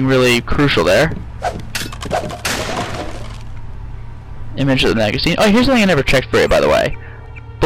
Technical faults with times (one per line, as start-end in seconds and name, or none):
0.00-7.65 hard clipping